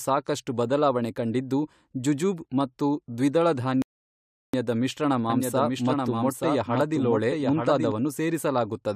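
At 3.82 s the speech drops to silence for about 0.72 s, a rebuffering stall: the player ran dry, waited for data, then picked up exactly where it stopped. From 5.30 to 7.92 s there's a doubled audio track, a clean, full-band copy trailing about a second behind and roughly 5 dB quieter. It's likely from a second, slower capture path, and it cuts in and out abruptly.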